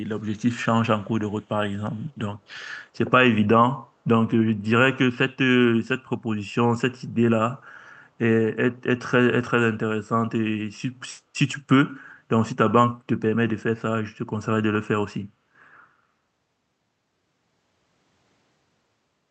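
A far-end echo canceller likely failed to fully remove what its microphone picked up from the loudspeaker, causing an echo leak from 1.3 to 1.44 s and again from 1.92 to 2.08 s: a very faint copy of the speech, trailing 141 ms behind, heard as brief ghostly scraps.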